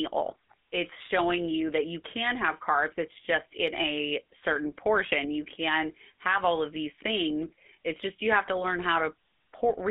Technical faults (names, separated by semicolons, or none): GSM full-rate codec; lost GSM frames